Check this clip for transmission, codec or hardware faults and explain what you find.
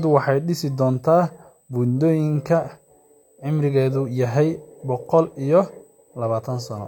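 One hardware fault is present. USB whine runs throughout: a fixed 8 kHz tone, about 40 dB below the speech, from the bus's 125-microsecond microframe current draw leaking through power or ground.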